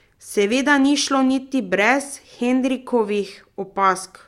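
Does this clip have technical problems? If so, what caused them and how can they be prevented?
No, there are no technical problems in this recording.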